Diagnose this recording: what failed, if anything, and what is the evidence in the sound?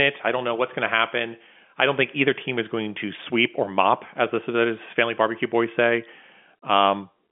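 Nothing here has failed: the speech sits in the ordinary telephone band of roughly 200 Hz to 3.4 kHz with nothing above about 3.7 kHz, which is just what G.711 telephone coding at a 64 kbps line rate would give.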